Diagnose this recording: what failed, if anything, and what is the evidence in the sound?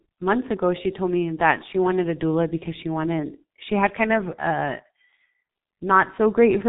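The failure is at the codec stage. G.723.1 compression runs through the recording. The speech is muffled, with nothing above 3.8 kHz. Consonants blur and the tone turns hoarse. Slow model updates smear detail, and the heavy damage fits the 6.3 kbit/s mode.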